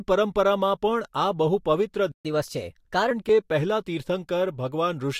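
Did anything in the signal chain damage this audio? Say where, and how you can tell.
Yes. A playback stall at 2.12 to 2.25 s silences the speech for 0.13 s, likely from buffer starvation. The waveform shows a flat gap, the spectrogram a blank vertical band.

Catch-up at higher speed follows from 2.25 to 3.11 s. The player resamples at 1.15 times speed, raising pitch about two semitones. The spectrogram shows harmonics shifted upward, then dropping back.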